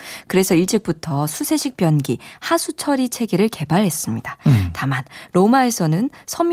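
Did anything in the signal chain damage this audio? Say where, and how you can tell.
No, nothing in this recording stood out on listening as a sign of damage anywhere along the signal chain.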